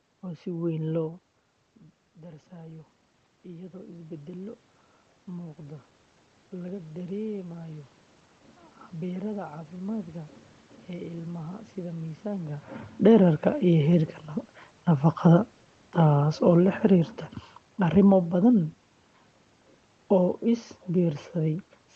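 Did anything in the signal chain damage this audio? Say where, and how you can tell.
Yes, and both problems sit in the call processing. From 0.22 to 7.96 s there's automatic gain rising. The level drops by about 16 dB when the talker moves back around 1 s, and the AGC then slowly adds about 10 dB. You hear the speech and the room noise swell up together.

Later there's automatic gain falling, from 15.19 to 18.71 s. The AGC decides the input is too hot, or its background too strong for the gain it had, and pulls its gain down by about 4 dB over a few seconds, so the speech and the background sink together rather than the talker simply getting quieter.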